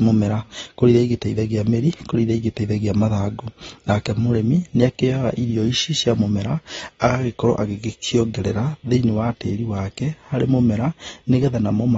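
From the start the speech sounds dull and smeared, with a watery, warbling edge on sustained vowels and a fizzy texture on sibilants. Nothing is present above about 7.7 kHz, so a spectrogram shows a flat ceiling there, with patchy holes and blotchy, noise-like fill in the upper bands. This is plainly audible AAC compression, likely AAC-LC at a low rate that fits roughly 24 kbps, where a low cut-off and coarse quantisation trade detail for data.

At 7.00 s a sharp onset is preceded by a short hiss lasting about 20 ms, and the attack itself lands soft rather than crisp. This is pre-echo. The transform block spreads its quantisation noise evenly across its whole span, so noise sized for the loud attack also fills the quiet instant just before it. On a waveform, low-level fuzz rises ahead of the transient. On a spectrogram, a faint broadband smear sits just before the onset.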